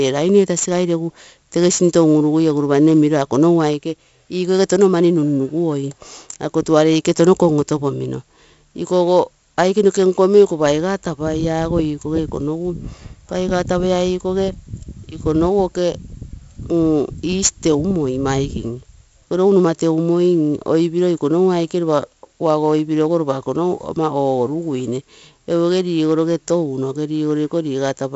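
Right through the speech there's 4-bit ADPCM compression, and heavy. Each sample is coded as a coarse 4-bit step off a prediction, so every loud stretch carries gritty hiss that rides its level, with roughness on sharp attacks. Nothing gets above about 7.7 kHz, which fits 16 kHz sampling at 64 kbps and explains the dull top.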